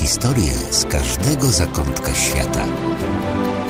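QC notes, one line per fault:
Nothing here to flag; I listened all the way through and heard no problems worth noting.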